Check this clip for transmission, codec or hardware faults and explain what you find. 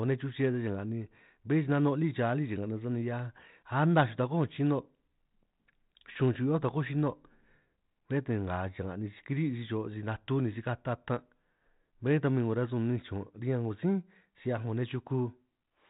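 Nothing stood out on listening through this speech clip.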